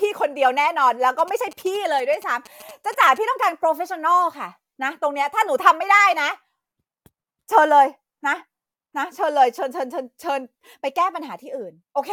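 From 1.19 s to 3.18 s, GSM signalling bursts intrude on the speech: a galloping dit-dit-dit of brief buzzes at about 217 Hz, roughly 20 dB below the voice. A nearby 2G phone is exchanging short groups of radio bursts with its network, and the audio circuitry rectifies that RF into audible pulses. On a spectrogram this appears as clustered vertical stripes with harmonic lines spaced every 217 Hz. The waveform shows trains of sharp, evenly spaced spikes.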